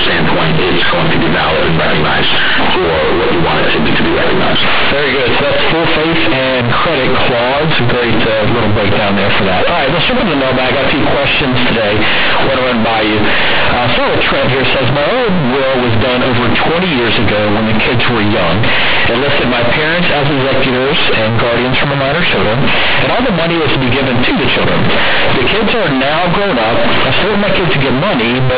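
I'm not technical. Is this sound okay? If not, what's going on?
No. Across the whole recording, this speech suffers from companded audio read as linear: telephone-style mu-law data is being played back as plain 8-bit samples without being expanded. Quiet moments come out as loud as peaks, giving harsh, buzzy distortion and heavy noise in pauses.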